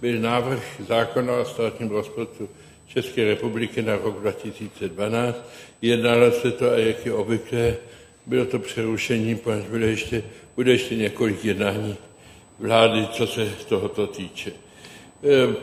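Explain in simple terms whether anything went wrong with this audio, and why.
Something did go wrong. A thin, steady, very high-pitched whine runs under the sound from start to finish. This is USB whine. A USB connection draws power in tiny bursts, eight thousand times a second. That pulsing leaks into the audio through the power or ground wiring. Here it sits at 8 kHz, and it is strongest at 16 kHz. It stays faint, well below the main sound, and its pitch never changes.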